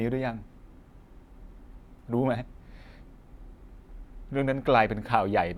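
Listening to this speech recording, nothing stood out as a technical problem.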